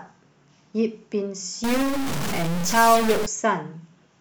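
From 1.64 to 3.26 s the speech turns harsh and buzzy and pauses fill with hiss. The likely cause is a stuck bit, shifting many samples by a step of about -20 dBFS. The waveform looks jagged, and the spectrogram shows broadband smear.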